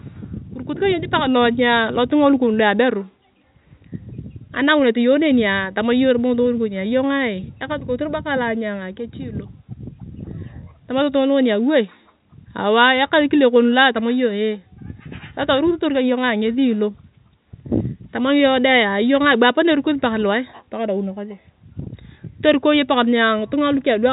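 No faults can be heard in this speech.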